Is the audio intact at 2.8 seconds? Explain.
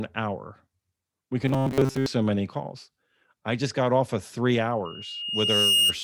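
Yes, the speech at 2.8 seconds plays through intact, with no dropout, click, distortion or other fault at that moment.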